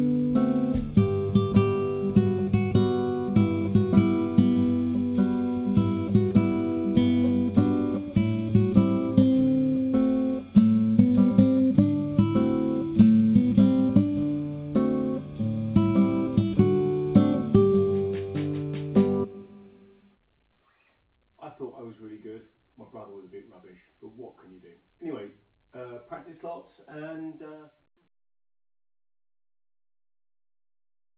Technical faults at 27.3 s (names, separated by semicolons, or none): none